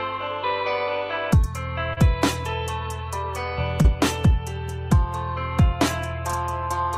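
Short concealed packet loss occurs at 1.93 to 1.98 s and again at 3.82 to 3.86 s. In each case about 20 ms of audio arrived too late, and the decoder extrapolated the preceding sound before crossfading back. The result is a brief smear or wobble.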